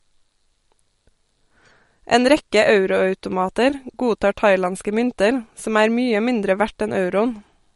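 From the start, the speech carries MP3 compression damage: nothing sounds above 11.2 kHz, and the sound turns watery and swirly, which fits a low bitrate near 48 kbps. A spectrogram shows a flat ceiling at 11.2 kHz and small gaps flickering between frames.

From 0.11 s to 7.74 s, faint clock slip clicks tick steadily about every 0.05 s, some 150 in all. They are likely single samples dropped or repeated between two unlocked clocks differing by roughly 500 ppm, and appear as evenly spaced thin vertical lines or waveform steps.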